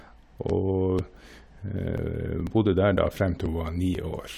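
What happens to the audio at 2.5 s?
At 2.47 s the speech jumps forward: a sliver of only a few milliseconds goes missing, and the audio on either side is butted together with no silent gap, so it comes across as a tiny skip or tick rather than a pause. This is audio missing between chunks, likely from the recorder or processor losing a moment while handing over from one half-second chunk to the next. Unlike a dropout, nothing is muted; the waveform simply jumps.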